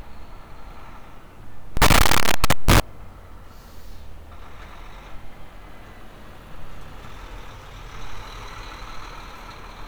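From 1.77 to 2.80 s the audio becomes a loud, harsh buzz in which quiet stretches blare as strongly as peaks, likely a signed and unsigned mix-up on the 8-bit samples: the flipped top bit turns every zero crossing into a full-range jump.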